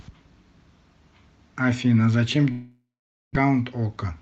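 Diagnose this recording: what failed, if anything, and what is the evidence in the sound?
Long network dropout, 2.51 to 3.45 s, at the network stage. The speech dissolves into a fading buzz as the receiver's concealment stretches the last sound, then about half a second of silence follows before the audio resumes with a piece missing. A burst of lost packets is the likely cause.

Jitter buffer speed-up, 3.90 to 4.12 s, in the receive buffer. The speech runs about 15% fast at unchanged pitch and sounds hurried. The buffer is trimming its backlog by removing short pitch-period slices, roughly 40 ms in all, from the Opus call audio, which is band-limited to 8 kHz.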